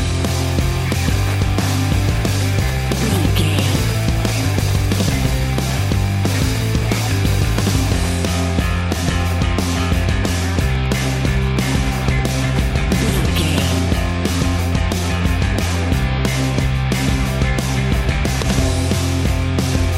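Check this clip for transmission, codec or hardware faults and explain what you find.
One hardware fault is present: Wi-Fi interference, running from 0.00 s to 13.99 s. A Wi-Fi radio near the audio circuit sends a beacon every 102.4 ms, and the circuit rectifies each burst into the audio path. It is heard as a steady ticking about ten times a second, roughly 25 dB below the sound. On a spectrogram it shows as thin vertical broadband lines evenly spaced about 0.1 s apart. The waveform shows matching small regular spikes.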